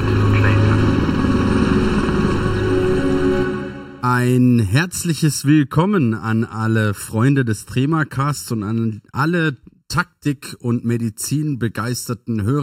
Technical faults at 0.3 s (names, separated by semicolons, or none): channel delay (comb filtering)